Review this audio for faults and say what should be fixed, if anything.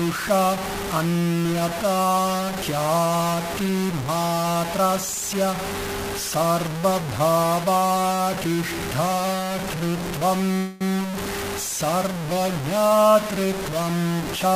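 Throughout the clip, the likely cause is the signal being truncated to about 4 bits with no dither, which is low bit depth without dither. The rounding error tracks the sound, leaving grainy, shifting distortion only roughly 10 dB below it, and quiet passages turn gritty or sputter. Keeping full resolution, or adding dither before any reduction, would prevent it.

From 10.57 to 10.84 s there is a call audio freeze, likely caused by delayed packets draining the jitter buffer. For about 233 ms the last sound is stretched into a fading buzz or hiss, then playback resumes where it stopped, so nothing is lost but everything afterward runs 233 ms late. A larger or adaptive jitter buffer on a steadier network path would prevent it.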